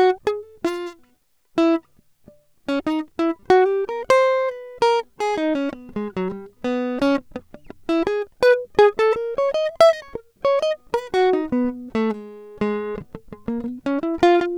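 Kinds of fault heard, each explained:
Nothing stood out on listening to this music.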